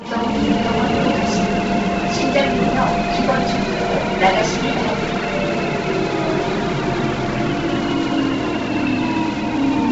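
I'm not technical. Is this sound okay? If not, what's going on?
No. From start to finish, nothing is heard above 7.8 kHz, and the sound has a grainy, breathy edge. That likely comes from heavy Bluetooth LC3 compression.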